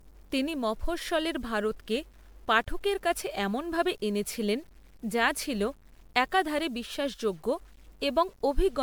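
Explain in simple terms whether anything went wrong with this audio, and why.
A gritty, grainy roughness clings to the speech the whole way through, and the quietest moments turn harsh or sputter rather than fading smoothly. This is low bit depth without dither: the sound fits about 9-bit audio that was likely chopped down to coarse steps with no smoothing noise added.

Running alongside that, the speech sounds swirly, smeared and hollow, and the starts of sounds are blurred from beginning to end. That points to generation loss, likely from the audio being compressed in an MP3-style format and then decoded and recompressed many times, with damage piling up on each pass.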